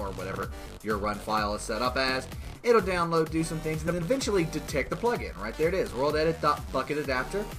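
Two runs of neighbouring frames were delivered and decoded in swapped order, a frames out of order fault, at 0.33 to 0.42 s and again at 3.86 to 4.02 s. Each time, two blocks, roughly 83 ms the first time and 93 ms the second, play with their halves exchanged, which points to small groups of a few frames each. The result is a brief garbled flutter. No time is lost, so the timing around each swap stays intact.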